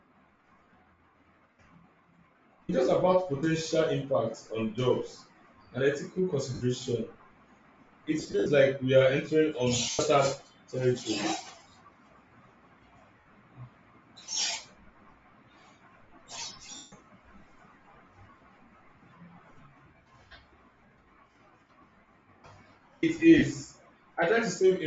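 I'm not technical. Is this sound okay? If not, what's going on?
No. The speech has a breathy, grainy edge throughout, likely from Bluetooth LC3 compression, which strips out the upper detail and fills it with noise. Brief noisy smears and dropouts at 6.54, 8.2 to 8.46, 9.91, 13.17 to 13.39, 16.76, 18.77 and 23.38 seconds are lost LE Audio frames, where the receiver patched the gaps with guesswork.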